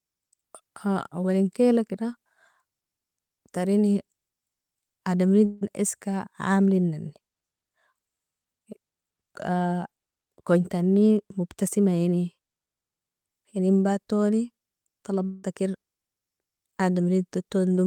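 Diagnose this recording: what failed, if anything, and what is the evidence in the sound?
Two gaps in the speech, from 5.45 to 5.63 s and from 15.25 to 15.45 s, are filled by a smeared, buzzy continuation of the preceding sound rather than by silence. About 160 ms and 180 ms of the real signal are missing, and each gap is covered almost entirely by that decaying fill. The likely cause is a long network dropout. Packets stopped arriving, the receiver's concealment extended the last received audio, and playback resumed later without the lost section.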